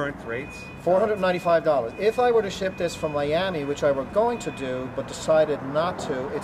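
Nothing here trips the ear, with no glitch or hiccup anywhere along the way to point at.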